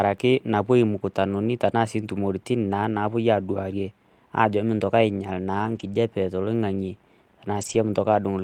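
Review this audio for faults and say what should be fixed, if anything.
Lost packets rebuilt from error correction at 2.93–2.99 s, 5.59–5.93 s and 7.57–7.75 s: low-bitrate backup copies fill each loss, so the speech turns briefly rough and noisy instead of dropping out or smearing. Reducing packet loss on the network path, for example with a more stable connection, would prevent these.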